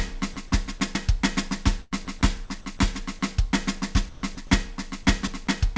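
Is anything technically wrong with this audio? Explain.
Yes. A voice detector on the sending side is cutting the music out, which is likely the cause of two kinds of fault.

Sound dropped by the voice detector, at 0.34 to 0.36 s, 0.78 to 0.80 s, 5.03 to 5.05 s and 5.45 to 5.47 s: the detector mistook the music for background and stopped sending for 20 ms each time. Comfort noise was played in its place, so each spot is a tiny gap of synthetic hiss.

Sound chopped by the voice detector, from 1.82 to 2.79 s and from 4.09 to 4.51 s: here the detector switched on and off repeatedly, and about 232 ms and 200 ms of music became comfort noise. The result is choppy, with holes where the music gives way to artificial noise. Above all this sits a call codec's band limit, with nothing above 8 kHz, which fits the G.722 codec.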